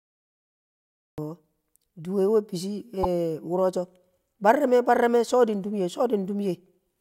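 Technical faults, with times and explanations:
0.00–1.18 s, cut-off start: The capture began late, so the clip opens on digital silence and then drops straight into the speech partway through a sound at 1.18 s. With no natural attack or fade-in, the entry is abrupt and clipped-sounding.
3.03–3.06 s, corrupt frame decoded: Flipped bits in what sounds like a single compressed frame were decoded anyway, so misread gains or codes placed energy at wrong frequencies. For those roughly 24 ms, a brief synthetic blip or chirp cuts across the speech.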